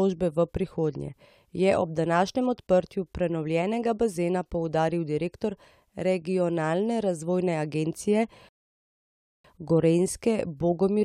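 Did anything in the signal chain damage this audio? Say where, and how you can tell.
Yes: a rebuffering stall from 8.49 to 9.45 s, at the playback stage where the streaming player feeds its buffer. The speech cuts to silence for about 0.96 s and then picks up exactly where it stopped, with no syllable skipped or repeated. That clean resume is the giveaway. The player drained its store of downloaded audio, waited for more data to arrive over the network, and then continued. Nothing is lost, but the pause adds time.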